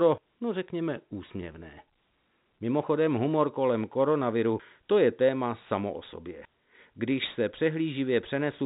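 No technical faults are audible.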